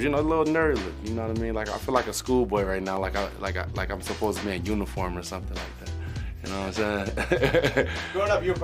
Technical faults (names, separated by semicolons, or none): dropped samples